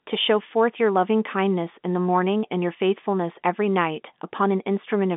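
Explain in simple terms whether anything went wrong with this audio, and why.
Nothing went wrong; the speech has the narrow, slightly boxy sound of an ordinary telephone line, which is how phone audio normally sounds, not a fault.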